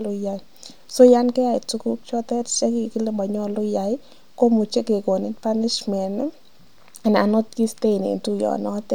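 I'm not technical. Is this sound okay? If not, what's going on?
Yes, nothing stood out as a problem when listening to this recording.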